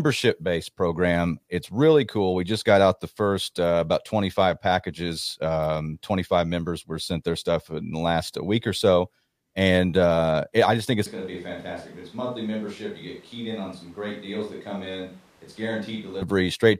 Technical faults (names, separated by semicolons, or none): switch to a distant microphone